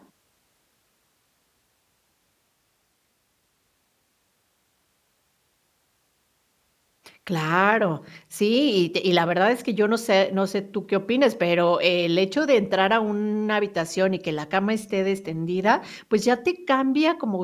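Speech recording; no technical faults can be heard.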